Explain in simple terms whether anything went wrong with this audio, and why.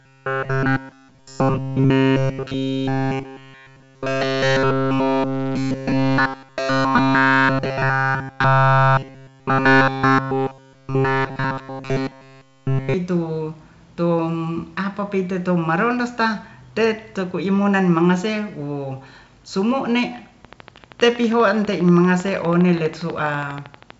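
Two things went wrong. From 0.01 to 12.94 s the speech has robotic sound from repeated short buffers: it becomes a stiff metallic buzz at a fixed 134 Hz. That pitch likely comes from the same 7.5 ms scrap of audio being replayed over and over while the real sound was skipped.

From 20.45 to 23.91 s there is a train of clicks, about forty regularly spaced ticks at 12.4 per second, audible over the speech. They likely come from electrical interference or a faulty connection or power supply.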